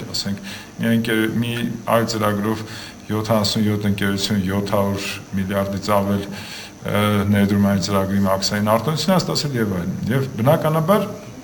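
Throughout, imaging from sample-and-hold upsampling adds a metallic fizz between 12 and 24 kHz, about 23 dB down. Unlike hiss, it tracks the sound's level and moves against its pitch.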